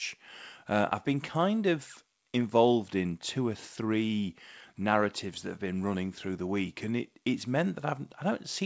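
The speech carries no audible technical faults, and its band stops at 8 kHz, which fits the wideband G.722 coding of a call path running at 64 kbps.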